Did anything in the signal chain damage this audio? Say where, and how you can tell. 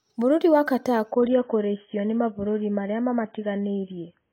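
Yes: from 1.12 s to the end the treble abruptly vanishes above 3.7 kHz, with no gap. That is adaptive stream at a lower bitrate, a network-driven codec switch, which fits AAC dropping from 96 to 16 kbit/s.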